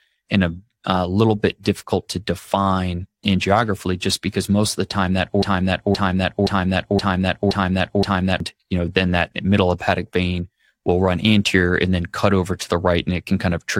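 From 5.43 to 8.40 s, after "of the time that", a broken-record loop repeats one 0.52 s piece six times, likely from a stalled stream, appearing as identical back-to-back waveform blocks.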